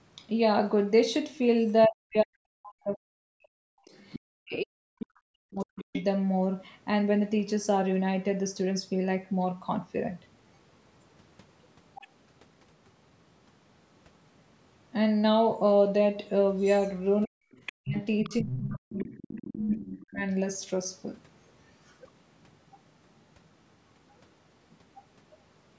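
From 1.87 to 5.95 s, with about three seconds affected, the echo canceller likely treated both people talking at once as echo, causing speech suppressed in double talk: the speech dips by as much as about 40 dB. Inside that stretch, at 3.96 to 4.19 s, the other side's voice leaking through appears, likely from loudspeaker echo the canceller failed to remove, sitting about 15 dB below the speech. It returns at 5.6 to 6.04 s at about 10 dB down, briefly at 11.95 to 12.02 s around 25 dB down, and from 16.58 to 19.76 s at about 10 dB down. Overlapping that last stretch, from 17.24 to 20.23 s, the same double-talk suppression cuts the speech again by up to about 40 dB over roughly two seconds. Faint leakage follows at 22.42 to 23.48 s, about 40 dB down, and 24.71 to 25.35 s, about 35 dB down. Throughout, the call's microphone processing keeps the audio band-limited, with nothing above 8 kHz.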